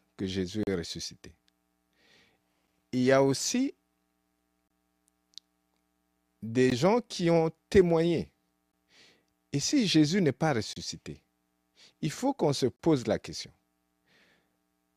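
Silent holes with hard edges recur every 2 s in the speech at 0.63, 2.67, 4.68, 6.70 (just before "gens qui ont témoigné"), 8.72 (just after it), 10.73 (after "n'est pas") and 12.76 s, lasting about 7 to 38 ms. These are gaps between stream segments: segment timestamps leave a small gap that plays as added silence. Unlike a dropout, no speech is lost; the following sound resumes intact, only delayed.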